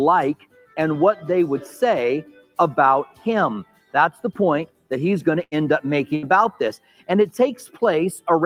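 Throughout the clip a noise suppressor applied to music or sounds is active. A suppressor designed for speech treats sustained tones and decaying tails as background and keeps pulling them down, so the level pumps with a swing of around 10 dB. Onsets pass largely intact while anything held sinks behind them, which leaves the texture thinned and unsteady.

The worst instances are heard as sound cut by the noise suppressor, where a passage is judged to be noise and attenuated well beyond the general pumping: 0.35 to 0.77 s (deepest about 18 dB), 2.23 to 2.58 s (about 17 dB), 3.08 to 3.26 s (about 11 dB), 3.64 to 3.94 s (about 15 dB), and 4.67 to 4.91 s (about 18 dB). In each, the sustained content drops away or its decay is truncated rather than dying naturally.

At 5.43 to 5.54 s a burst of packet loss occurs. The receiver concealed 80 ms by extending the last audio and fading it, heard as a brief smeared hold, and 80 ms of the original is skipped before playback resumes. 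A second burst at 6.15 to 6.26 s behaves the same way, with 71 ms filled and 80 ms missing.

Two further suppressor cuts follow, at 6.77 to 7.08 s (about 16 dB) and 7.67 to 7.82 s (about 13 dB). Both again sink held material while transients survive.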